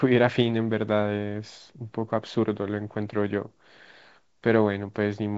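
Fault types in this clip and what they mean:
No faults in this clip.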